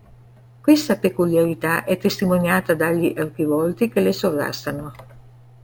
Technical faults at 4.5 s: imaging from sample-and-hold upsampling

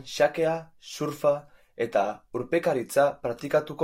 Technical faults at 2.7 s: none

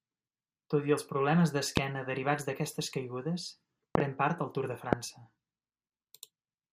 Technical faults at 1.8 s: loud pop

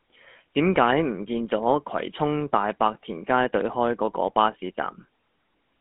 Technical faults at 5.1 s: GSM full-rate codec

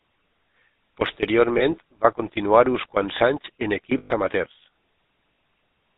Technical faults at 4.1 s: GSM full-rate codec; lost GSM frames

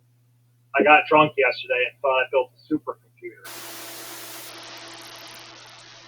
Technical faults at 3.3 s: noise suppressor artifacts

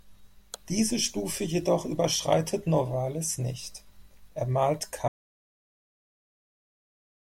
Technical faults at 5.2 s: audio dropout to silence

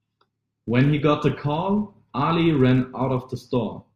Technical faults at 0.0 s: filter restarted on every block

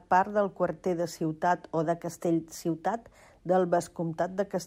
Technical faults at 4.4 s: none

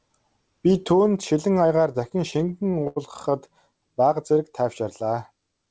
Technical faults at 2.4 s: repeated stalls (stutter)

